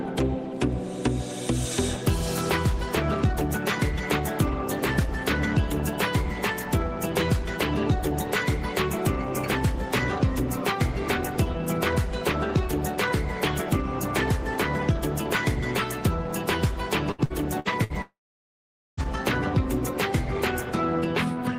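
Repeated packet loss (robotic sound) runs from 17.11 to 17.93 s. Five short holes, the longest 69 ms, are each papered over by stretching the preceding sound, so nearly a third of this span is synthetic fill, giving a choppy texture with pieces missing.

A long network dropout follows from 18.02 to 19.00 s. The last sound is briefly extended as a fading buzz or hiss, then about 0.84 s of silence remains. Roughly 0.96 s of audio is simply gone, most likely because nothing arrived over the network for that stretch.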